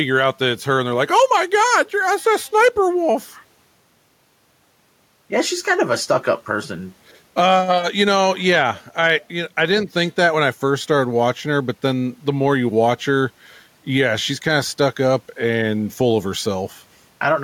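From start to finish, the input gain is likely set far too high for the microphone, so a fast limiter or compressor keeps pulling the level down on every loud syllable and releasing it in the gaps. The result is gain pumping. The level swings by around 5 dB, the faint room noise sits about 44 dB below the speech, and the speech sounds squashed, with loud and soft parts pressed together.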